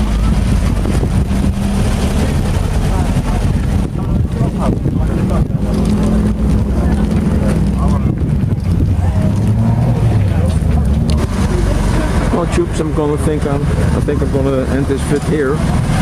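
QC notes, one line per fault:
Throughout, gain pumping: the gain swings by around 5 dB, and the loud and soft parts sit oddly close together, so it all comes across squashed. Likely cause is the input gain set far too hot, with a fast limiter or compressor clamping down on every peak.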